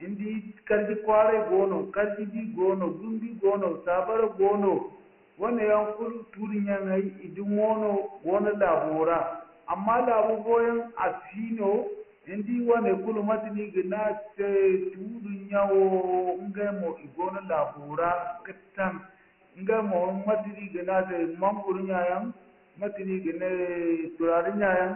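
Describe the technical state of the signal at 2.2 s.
At 2.2 s, as throughout, the speech carries Dialogic VOX ADPCM. Coarse 4-bit coding leaves heavy gritty hiss. Nothing remains above 3.1 kHz, which fits a 24 kbps stream.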